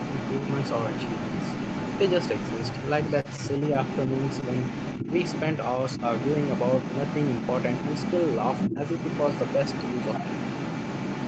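From start to finish, a second voice sits underneath the main talker: the other side's voice leaking through, running only a few decibels below the speech. The likely cause is an echo canceller that failed to strip the far end's loudspeaker sound from the microphone. Unlike crosstalk or a bleed from another source, it is a conversational partner's voice, present throughout rather than in isolated scraps.

At 3.2 s comes a short stall from a late packet, lasting to about 3.27 s. The jitter buffer ran dry, so the receiver held the last sound for about 44 ms until the packet arrived, then resumed exactly where it had stopped. Nothing is skipped, and that is what separates it from a dropout or concealed packet loss. The sound just hangs briefly, with a faint buzz or dip.

Between 8.70 and 8.79 s the main talker briefly sinks, by around 15 dB at the deepest point, for roughly a tenth of a second. 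This is speech suppressed in double talk, likely the echo canceller clamping down while both sides spoke at once. Unlike a stall, the sound is not held. It is turned down, and it recovers as soon as the overlap ends.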